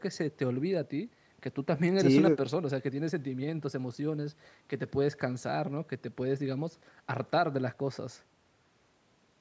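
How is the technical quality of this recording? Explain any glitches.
No glitches or faults can be heard in this speech recording.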